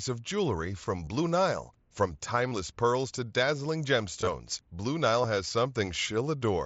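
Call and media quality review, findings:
Brief buzzy, held-level fills with slight warble on recovery at 1.05 s (after "of jewelry from"), 2.50–2.52 s, 4.21–4.27 s (short gaps scattered over 60 ms); near-hidden single loss at 5.23 s. Concealed Bluetooth headset packet loss: lost wideband mSBC frames were replaced by repeated recent waveform.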